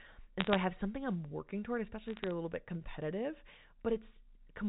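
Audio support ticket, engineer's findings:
Bit errors on a digital phone line, 0.40–0.56 s and 2.08–2.31 s: bursts of sharp ticks and crackle over continuous speech. The rate fits a few flipped bits per thousand, each corrupting a single sample on the G.711 mu-law path. Unlike packet loss, the speech underneath carries on with no gaps or smearing.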